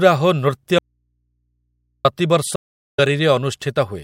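Speech, with two separate breaks. At 0.79 s the audio drops out to a faint residue. It does not return until 2.05 s, about 1.26 s later. The gap holds only mains hum, around 50 dB below the speech. The cut is abrupt, not a pause. The likely cause is a lost input while the path stayed live. At 2.56 s a stream reconnect follows. There is 0.37 s of dead silence. Speech resumes around a third of a second further on, skipping material. A fresh decoder restarts it, with the recovery ending at 3.0 s.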